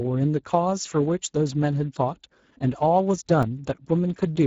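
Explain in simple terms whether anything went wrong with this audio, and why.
Two things went wrong here. The first runs through the whole clip: the speech has been squeezed through the Speex codec, an older speech codec from internet calls and game chat. It was set low enough that the damage is plain to hear. The speech comes out rough, hoarse and a bit noisy, because there isn't enough data to rebuild it properly. Nothing above about 7.7 kHz survives.

The second is a tiny glitch at about 3.43 s: a block of digital silence. For under 3 milliseconds the audio was replaced with silence, most likely because the software didn't deliver that piece of sound in time. Since the sound drops to nothing and jumps straight back with no fade, you don't hear a gap as such. It comes across as a quick tick or click right at that moment.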